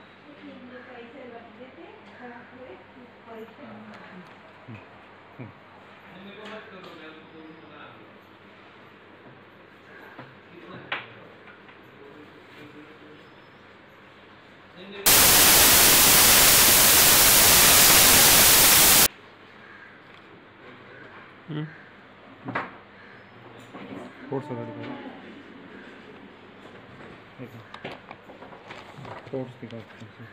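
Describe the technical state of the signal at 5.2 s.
Nothing at 5.2 s marks a fault; the signal runs intact through that moment.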